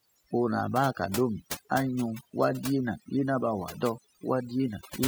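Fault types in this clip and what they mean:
overdone noise removal: throughout, the background drops and breaks up into twinkling specks, from noise reduction pushed too hard.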